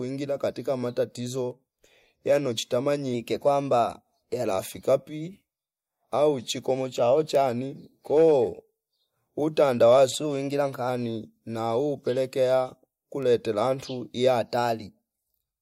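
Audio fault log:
3.14–4.44 s, 10.12–10.89 s, 14.41–15.05 s: drift correction step. Speech runs 6.1% fast and about a semitone (103 cents) sharp, then snaps back, likely from clock-matching software resampling to adjust its buffer.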